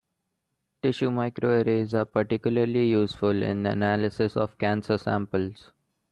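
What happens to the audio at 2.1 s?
At 2.09 s, lasting to about 2.13 s, there is a short concealed packet loss. About 20 ms of audio never reached the decoder in time, so the receiver invented roughly 16 ms of fill by carrying the last sound forward, following its pitch where it was voiced or using shaped noise where it wasn't, before blending back into the real signal. It comes across as a brief smear or wobble, and a short consonant can drop out.

It follows directly on a lost packet rebuilt from error correction, running from 1.77 s to 2.07 s. Here several packets went missing, but the following packets carried low-bitrate copies of them, which the Opus decoder played back, covering about 160 ms within that stretch. That reconstruction leaves no gap, only a rougher, noisier grain. What separates the two is that the first segment is degraded but genuine audio, while the moment at 2.1 s is guessed sound stitched across a real hole.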